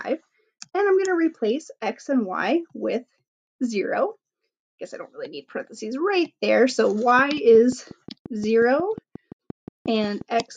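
From 7.19 to 10.41 s, a train of clicks ticks at a steady 5.6 per second, about twenty, peaking above the sound. Likely interference or a faulty connection.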